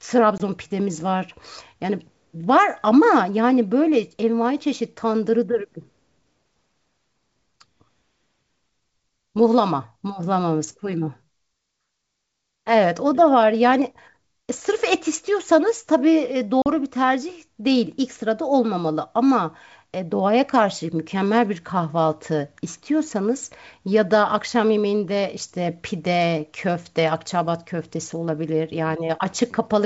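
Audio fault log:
0.38 s and 16.62 s, packet loss on an ADPCM call: roughly one packet, then two, went missing and became silence (20 ms, then 40 ms). The decoder's predictor and step size lost track of the sender's, so after each hard-edged gap the speech returns slightly distorted, settling within tens of milliseconds.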